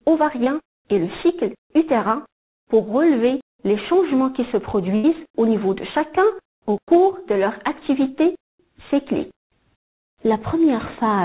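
At 0.44 to 0.48 s there is a short concealed packet loss: about 20 ms of audio never arrived in time, and the receiver extended the preceding sound for roughly 16 ms before blending back. It is heard as a brief smear or wobble.

At 4.96 to 5.06 s a burst of packet loss removes about 80 ms. Concealment carries the last sound forward for roughly 78 ms while fading it, giving a held buzz or dying hiss, and the audio resumes with that stretch missing. Both dropouts sit in narrowband call audio with nothing above 4 kHz, which fits a G.711 path.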